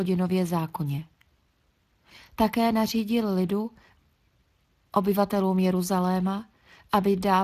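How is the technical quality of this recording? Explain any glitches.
The technical quality is compromised by plainly audible Speex codec damage across the whole speech clip. Throughout, low-bit excitation coding leaves speech hoarse and noisy, consistent with roughly 22 kbps. A spectrogram shows noise-like fill above 8 kHz.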